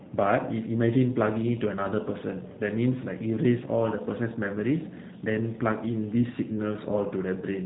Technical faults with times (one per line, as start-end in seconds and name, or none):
0.00-7.65 G.729 codec